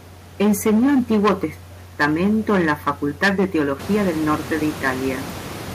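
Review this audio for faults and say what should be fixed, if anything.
Hard clipping throughout: the speech drives about 11 dB past what a stage can pass, flattening roughly 7 percent of samples into harsh fuzz on louder sounds. To prevent it, reduce the gain ahead of the overloading stage so peaks keep clear headroom below full scale.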